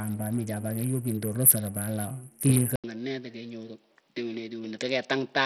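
From the start, the speech carries heavy damage typical of Bluetooth SBC compression at a low bit pool, likely near 64 kbps. The upper sub-bands starve and flicker while coarse quantisation adds grit and aliasing. A spectrogram shows patchy, blinking treble bands and grainy noise.

At 2.76 s an 80 ms silence gap appears, and then the sound turns duller and about 10 dB quieter, likely because the input switched to a poorer device. Nothing passes above 7.6 kHz, and a faint new noise floor sits well below the signal. The spectrogram shows a hard ceiling, and the waveform shows a smaller envelope.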